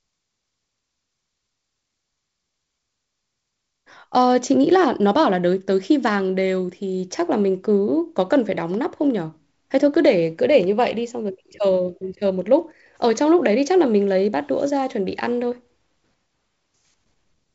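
No technical faults are audible anywhere in this speech.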